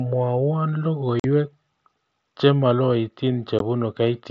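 Unconcealed Bluetooth headset packet loss cuts the speech at 1.20 to 1.24 s, a hole of about 45 ms, and again briefly at 3.59 s. Voice packets between the headset and phone over the mSBC link never arrived, and nothing filled the gaps, so the silences have abrupt edges.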